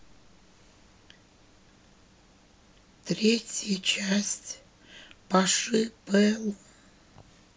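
Listening closely to the speech, nothing stood out as a technical fault at any point.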